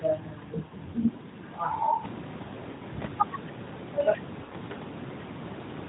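Lost AMR speech frames at 0.66 to 0.74 s, 2.72 to 2.85 s and 4.44 to 4.77 s. Corrupted frames were concealed by repeating the last good pitch and vocal-tract settings at falling gain. This gives brief drawn-out, fading dips. The last event is scattered over 320 ms.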